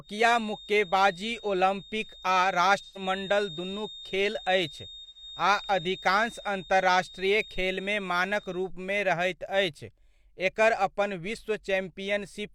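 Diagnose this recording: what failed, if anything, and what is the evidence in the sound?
A steady 3.7 kHz feedback whistle sits well below the speech from 0 to 8.72 s, swelling and fading slowly, likely a loudspeaker-to-microphone loop held just short of runaway.

AAC frame loss with concealment at 2.82–3.02 s and 5.04–5.23 s: smeared, phasey patches where the decoder rebuilt about 128 ms each from earlier spectra.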